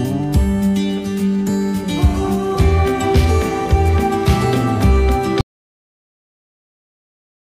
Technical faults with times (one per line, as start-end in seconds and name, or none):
5.41-7.47 audio dropout to silence